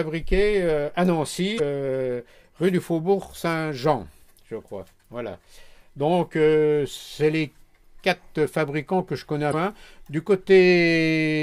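At 1.56 to 1.60 s and again at 9.50 to 9.54 s, damaged data in the compressed stream produces a short disturbance lasting about 44 ms. Corrupted bytes leave the decoder unable to parse those frames, so it loses sync until it resynchronises on the next valid frame header.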